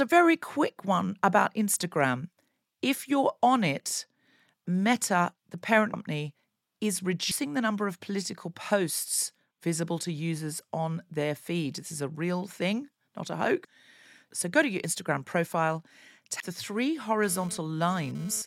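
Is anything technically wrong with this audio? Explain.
Yes. Compressed frames skipped occur at 5.94 s (after "the parent"), 7.31 s (before "the number of political"), 13.65 s (after "real thing not a") and 16.40 s. Each time the decoder never plays a run of whole frames, which fits 32 ms frames, dropping roughly 150 to 200 ms of speech.

GSM phone buzz runs from 17.23 to 18.42 s. A nearby 2G phone's bursting data transmission is rectified into a raspy, harmonic-rich 217 Hz buzz that comes and goes, about 20 dB below the speech.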